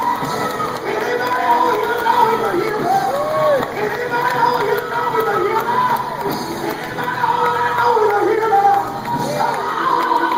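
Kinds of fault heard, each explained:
No faults can be heard.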